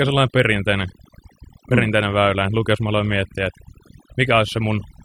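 Speech marred throughout by overdone noise removal: the background drops and breaks up into twinkling specks. The twinkling sits in the pauses rather than tracking the voice, unlike codec warble, and gaps never fully cut out as a gate would.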